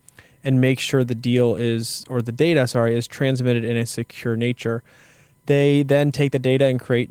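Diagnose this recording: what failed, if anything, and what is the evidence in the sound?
Nothing failed: the speech passes through the Opus voice compression stage in its full-band hybrid mode at about 20 kbps, and no stage from wiring to playback shows a break in the sound.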